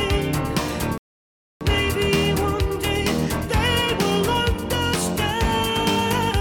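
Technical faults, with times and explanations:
0.98–1.61 s, rebuffering stall: the sound stops dead and a silent gap of about 0.63 s follows before playback picks up again at the very point where it broke off. The player ran short of downloaded data and paused until more arrived, so nothing is skipped and the clip simply runs longer. That sets it apart from a dropout or packet loss, where audio goes missing and the material after the gap has jumped ahead.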